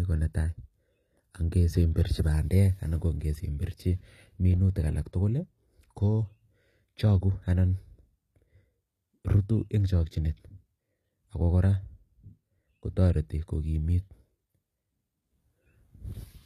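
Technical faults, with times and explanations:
throughout HE-AAC compression: plainly audible damage, nothing above 14.9 kHz, and gritty, metallic s sounds. Likely treble rebuilt from lower bands at a low bitrate, around 24 kbps.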